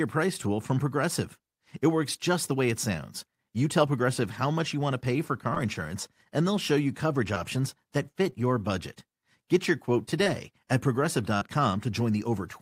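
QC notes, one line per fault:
11.37–11.42 s, short concealed packet loss. About 40 ms of speech arrived too late to play. The receiver bridged the gap with 43 ms of generated sound continuing the previous sound, then blended back. This comes across as a brief smear or wobble.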